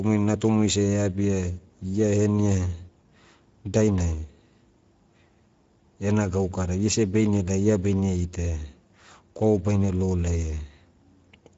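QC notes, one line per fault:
Throughout: Speex codec. Speech sounds rough and grainy, with nothing above 7.7 kHz. Coarse excitation coding, consistent with roughly 17 kbps wideband Speex.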